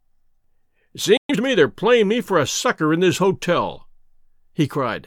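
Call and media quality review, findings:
Playback stall, 1.17 to 1.30 s: speech cuts to silence mid-flow for 120 ms, then resumes. Likely cause: the player's buffer ran dry or its output thread was blocked. Component: client playback/jitter buffer.

Time-compressed catch-up, 1.30 to 1.42 s, just before "me they're playing me": speech runs at 2x speed with unchanged pitch. The player drops short segments and cross-fades the joins to clear the backlog left by the stall.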